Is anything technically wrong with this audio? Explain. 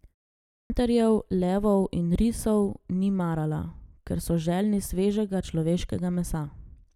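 Yes. At 0.5 to 0.7 s, after a silence of about 0.44 s, there is a clipped start after a pause: the output device sleeps during the silence and loses the first 200 ms on waking, so speech starts abruptly. Unlike muted pauses, sound is actually lost.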